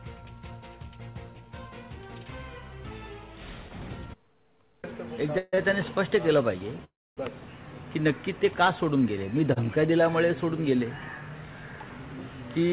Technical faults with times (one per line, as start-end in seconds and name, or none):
5.38-5.55 call audio freeze
5.55-5.59 short stall from a late packet
6.84-7.19 call audio freeze